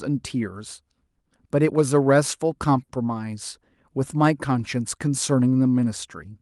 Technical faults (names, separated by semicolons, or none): short stall from a late packet